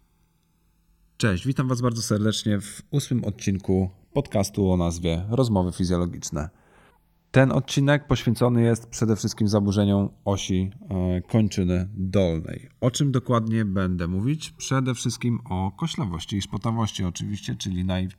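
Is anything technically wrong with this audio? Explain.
Yes. Throughout the speech, the channels are drifting apart. The left and right sides appear to have been captured on separate clocks that disagree by around 100 parts per million, so the delay between them slides steadily, reaching about a millisecond by the end. Combined to mono, the interference notches created by that offset creep slowly across the spectrum, giving the voice a gradual, hollow flanging sweep that keeps shifting in colour.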